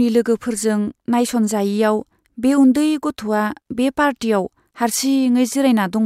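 No technical faults can be heard anywhere in the recording.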